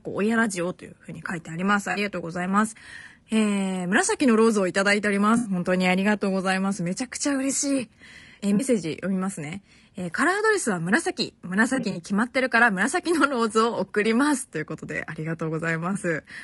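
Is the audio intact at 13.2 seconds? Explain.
No. At 13.2 seconds the speech is rough and grainy, as it is through the whole clip, and this is likely low-delay AAC compression of the kind used in video calls, which fits a bitrate around 32 kbps. Its short frames resolve pitch harmonics poorly, so noise fills the gaps between them. On a spectrogram the harmonic stripes look smeared with speckle between them, and the top band appears thinned or patchy.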